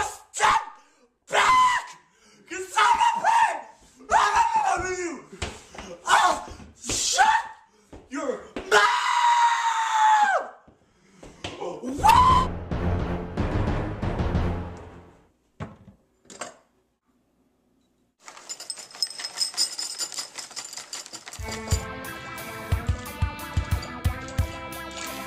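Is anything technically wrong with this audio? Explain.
No, nothing technically wrong stood out on listening to this audio.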